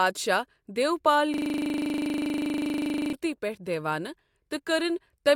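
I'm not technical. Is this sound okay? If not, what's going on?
No. From about 1.34 to 3.13 seconds there's a system hang loop: the computer froze while the sound hardware kept replaying the same 40 ms snippet of speech over and over, 25 times a second, so it comes out as a rough, steady buzz.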